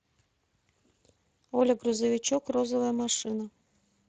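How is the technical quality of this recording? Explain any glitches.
The quality is noticeably compromised by one fault that runs through the whole clip. Speex codec damage is present from start to end: this CELP speech codec models the excitation with a limited bit budget, and at a rate that fits roughly 22 kbps that shortfall is plainly audible, leaving the speech grainy and hoarse rather than clean.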